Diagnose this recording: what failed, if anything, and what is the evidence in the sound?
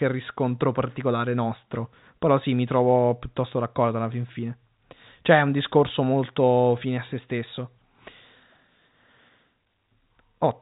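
Nothing failed: the speech reaches the listener over an intact G.711 telephone path, band-limited to 3.8 kHz as that coding should be, with no defect audible at any stage of the chain.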